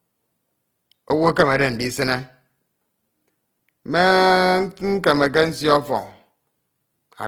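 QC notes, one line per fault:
Throughout, Opus compression: the speech sounds rough and grainy, with a noisy sheen on voiced tones and little swirl, while content still reaches about 20.4 kHz. This likely comes from Opus music-mode coding at a rate that fits roughly 16 kbps, where sparse bits force noise-filled bands.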